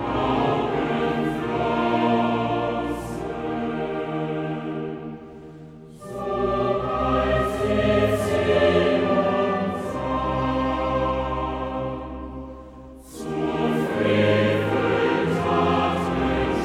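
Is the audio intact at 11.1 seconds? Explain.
Yes, at 11.1 seconds the audio is intact, with no dropout, click, distortion or other fault present at that moment.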